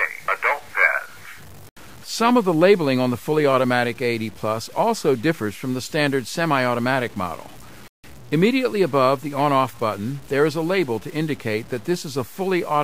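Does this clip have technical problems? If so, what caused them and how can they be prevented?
Yes. Low bit depth without dither runs throughout: grainy distortion that tracks the sound sits roughly 25 dB down, which fits likely 7-bit truncation. The waveform shows staircase steps, and the spectrogram shows a speckled, signal-following haze. Prevent it by working at 16 bits or more and dithering before any bit-depth reduction.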